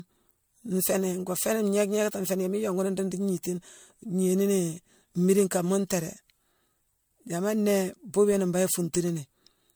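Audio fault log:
throughout, generation loss: the speech has likely been through an MP3 chain at 96 kbit/s several times over, around five passes. Each re-encode places its frames on a shifted grid and quantises afresh, so the coding noise and small spectral gaps pile up rather than repeat. The result is a swirly, hollow quality, thicker than a single 96 kbit/s encode would leave. Consonant onsets come across smeared and soft, and content reaches up to about 20 kHz.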